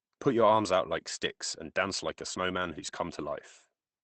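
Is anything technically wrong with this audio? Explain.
Yes. Lost packet rebuilt from error correction, 2.87 to 2.97 s: three separate packets of the Opus call stream went missing, and the decoder filled each from the low-bitrate backup copy that the following packet carries. About 60 ms of speech was rebuilt this way, which fits roughly three separate 20 ms packets. Nothing drops out, but that stretch sounds briefly rougher and grainier than the surrounding Opus audio, which is band-limited to about 8 kHz.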